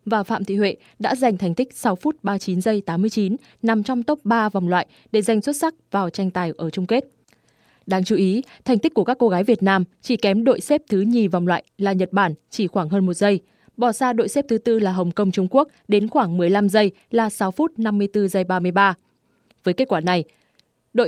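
No technical faults are audible anywhere in the recording.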